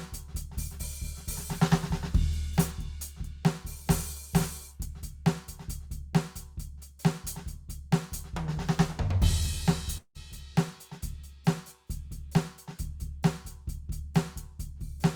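A long network dropout, likely from a stall in the stream's delivery, hits this music clip from 9.97 to 10.18 s. The receiver stretches the last sound into a fading buzz or hiss for about 173 ms, about 80 ms of the gap is silent, and roughly 180 ms of music never returns.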